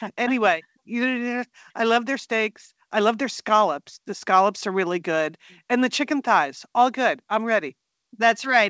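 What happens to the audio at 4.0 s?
Nothing goes wrong at 4.0 s: the speech comes through intact there, with only the ordinary band limit of the call's G.722 path, which leaves nothing above 8 kHz.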